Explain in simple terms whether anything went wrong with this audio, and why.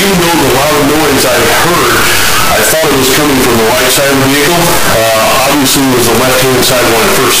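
From start to finish the sound is a harsh, very loud distortion, and even the quiet moments blare as loudly as everything else. The likely cause is signed and unsigned mixed up: the 8-bit samples were read with their top bit flipped, so every crossing of the midpoint leaps across the full range.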